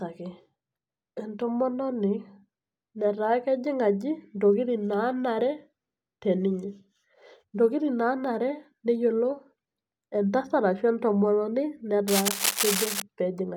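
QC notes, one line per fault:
12.08–13.02 s, cable scratch noise: for just under a second a dense, ragged rustling scrapes across the speech, roughly as loud as the speech itself. Likely a worn cable or connector being moved, its contact resistance jumping around and spitting uneven bursts of noise.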